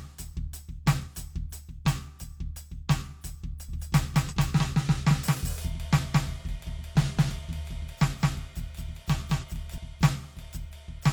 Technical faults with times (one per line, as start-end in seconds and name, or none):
1.02-1.08 compressed frames skipped
3.68-9.78 doubled audio track
4.28-4.34 compressed frames skipped
9.38-9.44 compressed frames skipped